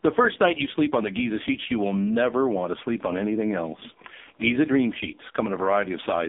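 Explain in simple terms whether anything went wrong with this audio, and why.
The speech sounds thin, muffled and boxy from start to finish, like a call on an old mobile phone, with a buzzy, robotic edge. This is AMR narrowband mobile codec damage, and it is heavy here. The audio passed through the AMR-NB phone codec at one of its lowest quality settings. It keeps only roughly 200 Hz to 3.6 kHz, so nothing above about 3.7 kHz survives, and it rebuilds the voice from a simplified model, which makes it sound synthetic.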